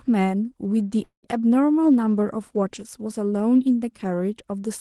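At 1.03 s the speech stalls until 1.26 s in a call audio freeze, likely from delayed packets draining the jitter buffer. The last sound is stretched into a fading buzz or hiss, dropping to about 120 ms of silence, then speech resumes intact but roughly 195 ms late.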